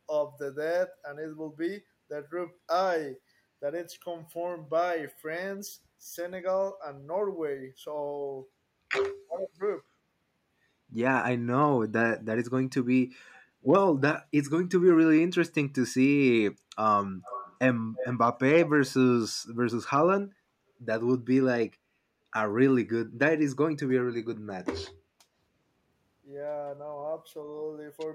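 At 9.17 to 9.37 s the speech sinks by roughly 35 dB for a fifth of a second, likely speech suppressed in double talk, with the canceller ducking the near talker. At 13.33 to 13.47 s the room sound dips about 6 dB, which is background gated by the echo canceller clamping the mic while the loudspeaker plays. Then at 17.23 to 17.58 s and 17.96 to 18.18 s a copy of the speech about 15 dB and then 10 dB below it trails by 285 ms, stronger the second time. That's an echo leak, likely from an echo canceller letting loudspeaker pickup slip back.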